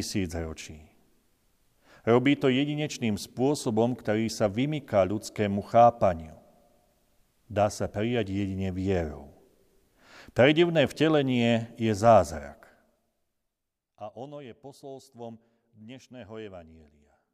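No faults found in the speech; nothing in the recording calls for correction.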